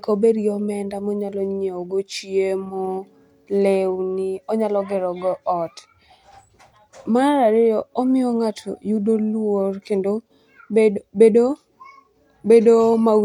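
No technical faults can be heard in this speech recording. There is nothing in the audio to place on a timeline or trace back to a cause.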